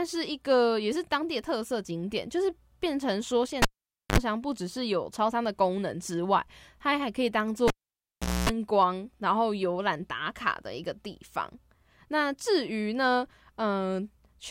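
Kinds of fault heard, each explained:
Cable pulled and plugged in: a live lead is pulled out and pushed back in, giving a pop, a near-silent gap, mains buzz while only the tip touches, then a second pop as the speech returns. At 3.62 s the gap lasts 0.51 s with 62 ms of 50 Hz buzz; at 7.68 s, 0.77 s with 251 ms of 60 Hz buzz. A spectrogram shows broadband click lines framing a dark gap with mains harmonics; the waveform shows spikes around a flat stretch.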